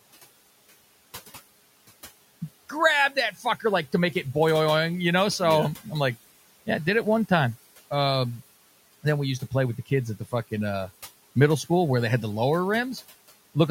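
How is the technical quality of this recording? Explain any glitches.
The recording opens with an audio dropout to silence: from the start to 2.41 s there is silence, with no room tone, and the speech enters abruptly on "grab that". The input was likely lost, with silence written until the signal returned. Room noise sits about 20 dB below the speech.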